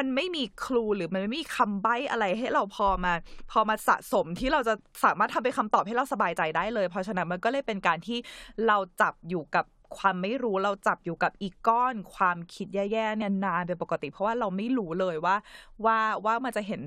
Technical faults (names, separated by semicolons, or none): audio missing between chunks